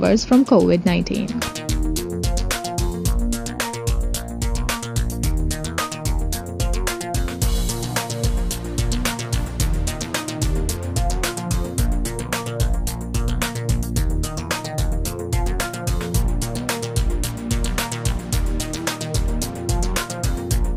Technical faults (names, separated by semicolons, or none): none